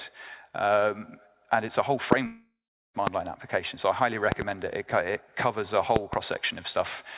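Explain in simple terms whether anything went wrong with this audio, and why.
Loud pops occur at 2.12 s and 3.07 s, with a quick double pop between 4.32 and 4.44 s and another between 5.96 and 6.16 s. These sharp thumps land on top of the sound, which keeps going underneath each one. The likely cause is a sudden electrical jolt, such as a loose plug, a switch flicking or a burst of static, that briefly shoves the signal far past its normal level before the equipment settles again.

A long network dropout runs from 2.26 to 2.96 s, about seven-tenths of a second of audio that never arrived. The receiving end tried to cover the gap by stretching out the last bit of sound it had, which turns into a fading buzzy hiss. For the final third of a second or so only silence remains. The sound then picks up again with the missing part simply gone, likely because a stall on the connection held back the data.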